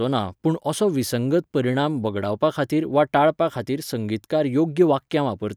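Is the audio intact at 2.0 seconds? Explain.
Yes, the audio is intact at 2.00 seconds, with the speech passing through that moment with no dropout, click, distortion or other audible fault.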